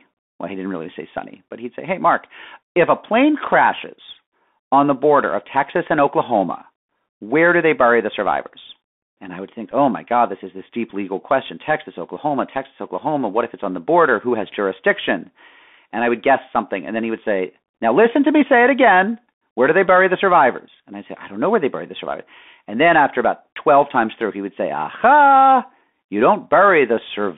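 Throughout, the speech has passed through the Bluetooth CVSD headset codec, whose one-bit delta coding, consistent with a 64 kbps link, leaves a line band of 200 Hz to 3.5 kHz. Its adaptive step cannot follow loud high sounds, so sibilants turn scratchy over a plainly audible granular hiss.

At 9.71 to 9.74 s, and again at 10.90 s, a Bluetooth headset packet is repeated. The headset lost about 7.5 ms of audio, which fits two lost packets, and decoded the previous packet again in their place, producing a brief tick or buzzy stutter each time.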